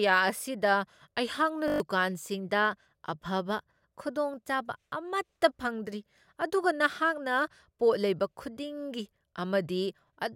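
At 1.68 s the system froze while the audio hardware kept replaying its ring buffer, a system hang loop. A single 20 ms slice repeats six times until 1.8 s, giving a steady 50 Hz buzz and swallowing about a tenth of a second of speech.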